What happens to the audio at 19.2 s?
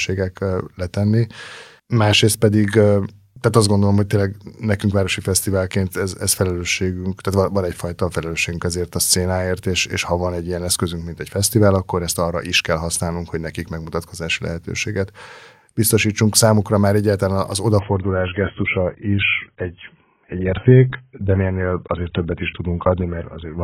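At 19.2 s the adaptive stream is playing at a lower bitrate, from 17.79 s to the end. The player switched abruptly, with no gap, to a lower-quality version, which fits a drop to about 16 kbit/s AAC. The speech loses everything above 3.8 kHz and picks up codec artefacts.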